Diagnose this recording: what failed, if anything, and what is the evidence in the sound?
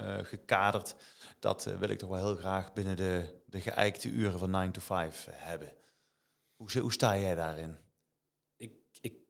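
Nothing in this speech recording points to a failure at any stage of the chain, so there's no fault to diagnose here.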